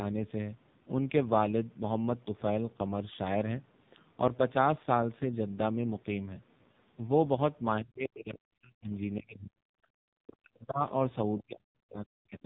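From start to finish the speech sounds buzzy, thin and synthetic, with nothing above 3.8 kHz. This is heavy damage from the AMR narrowband mobile codec. A vocal-tract model rebuilt from very few bits, around 5.9 kbps, strips out detail and leaves a mechanical edge.

Late in the clip the speech falls away by about 40 dB in three stretches: 9.18 to 9.59 s, 10.09 to 10.82 s, and 11.41 s to the end. Each stretch lasts longer than the one before. The likely cause is speech suppressed in double talk, where an echo canceller mistook overlapping talk for loudspeaker echo and pushed the talker down.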